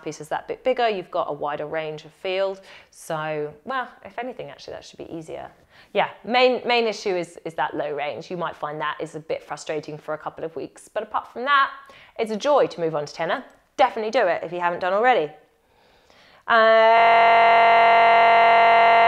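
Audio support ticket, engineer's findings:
System hang loop from 16.98 s to end of clip. Audio collapses into a steady buzz at 43.1 Hz: one 23.22 ms slice repeating exactly, which fits a 1024-sample ring buffer. Host or driver stalled while the audio device kept cycling that buffer.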